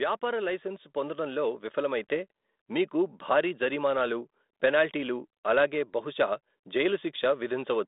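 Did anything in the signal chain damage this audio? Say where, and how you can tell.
Yes. The damage comes from call processing. At 2.04 s the microphone volume is stepped up by about 3 dB. The speech and background noise jump together in one instant step. So the call software raised the device's input gain. The talker didn't get louder.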